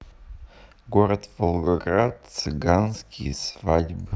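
Speech, with a time-stretched section from 1.16 s to the end at about 4.16 s. The pace abruptly drops to about 0.64 times normal speed while the pitch stays put. The slowed speech drags. Likely cause: software stretching the audio to a length by repeating short pieces.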